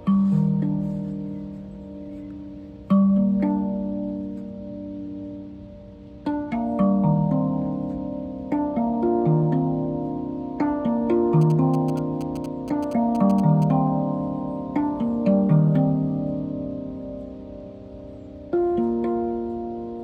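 From 11.41 to 13.64 s, GSM signalling bursts break through: a galloping dit-dit-dit of short 217 Hz buzzes, rectified by the audio circuitry, roughly 20 dB below the sound.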